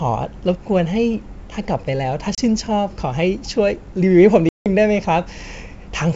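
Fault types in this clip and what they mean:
Packet loss on an ADPCM call: lost packets cut 30 ms and 170 ms silences, seen as blank spectrogram columns, then slightly distorted speech as the decoder's predictor and step size resettle.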